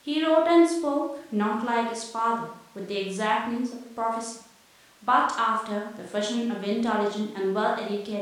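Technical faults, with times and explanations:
Listening through this speech recording, nothing stood out.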